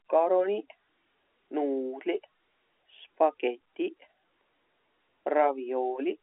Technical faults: none

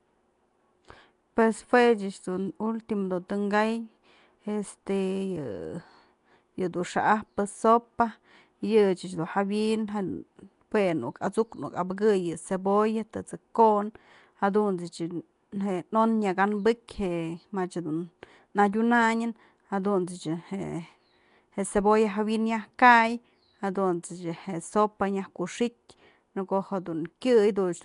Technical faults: Nellymoser compression

